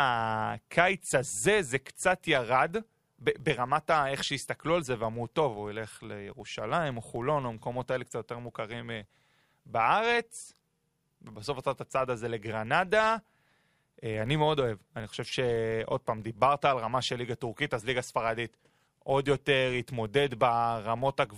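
Throughout, a filter restarted on every block starts each block from silence, giving a 50 Hz buzz that tracks speech level, unlike mains hum.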